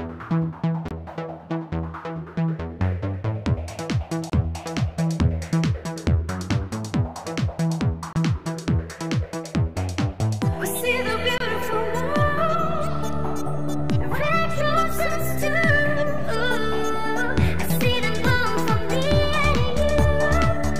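Four short holes open in the audio at 0.88, 4.30, 8.13 and 11.38 s, each about 23 ms long, a length that fits a single lost frame. The sound cuts out and returns as though it had kept playing, with nothing skipped back or repeated. That points to a likely Bluetooth dropout, with packets arriving too late at the headphones. Unlike a click or a concealment artefact, each gap is plain silence rather than a pop or smeared sound.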